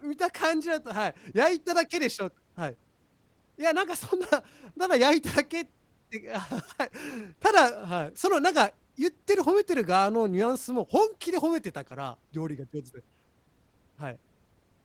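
No faults are audible in the signal, which carries Opus voice compression whose sound fits a hybrid coding at around 20 kbps that keeps the full bandwidth.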